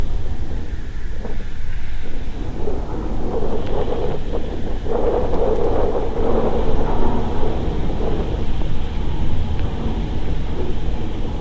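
No technical faults detected anywhere in this recording of sounds.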